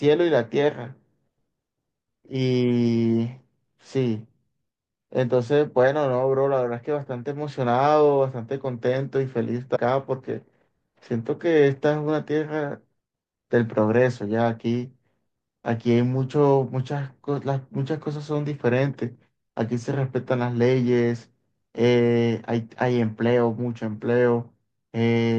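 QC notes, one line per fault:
9.75–9.77 s and 12.99 s: damaged data in a compressed stream. Twice in this speech clip, part of the compressed data has been corrupted, so the decoder cannot read the frames correctly, loses sync and searches for the next valid frame header. The first event lasts about 20 ms and the second is a single instant, and each is heard as a short chirp or blip breaking into the speech before decoding recovers.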